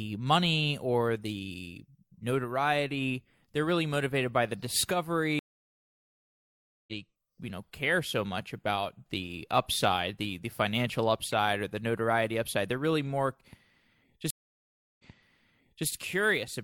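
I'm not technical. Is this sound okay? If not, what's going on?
No. The speech has two stream reconnect faults. At 5.39 s it goes silent for about 1.5 s and resumes about a second and a half further on, skipping material. At 14.30 s there is a 0.69 s gap, then it repeats 0.88 s of speech.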